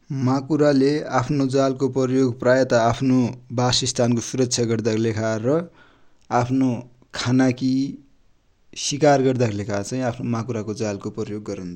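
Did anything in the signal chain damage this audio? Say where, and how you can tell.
No, nothing damaged this audio.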